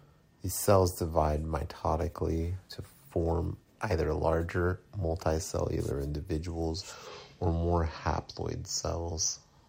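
Nothing in the recording stood out as a technical problem on listening.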